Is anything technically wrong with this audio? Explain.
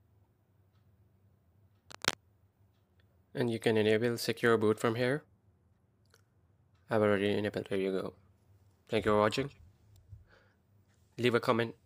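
Yes. From 1.90 to 2.14 s there is cable scratch noise. A worn cable or connector is likely shifting contact. Rustling bursts sit only slightly below the sound.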